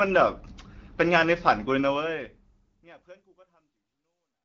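No technical faults can be heard in this speech. The level eases down in a smooth fade-out from around 2 s to the end, and the band-limited, HD Voice character fits AMR wideband coding at around 12.65 kbit/s, where speech stays clear.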